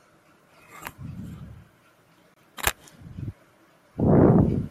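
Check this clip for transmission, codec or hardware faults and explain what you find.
One fault is present: a gap at a join of encoded pieces. At 2.34 s the speech drops to silence for about 24 ms, until 2.36 s. The audio was encoded as separate pieces and joined untrimmed. The encoder's start-up delay and the padding on the last frame both stayed in, leaving dead air at the seam. The codec smears the edges of the silence, so the silent part is shorter. The speech then resumes exactly where it stopped.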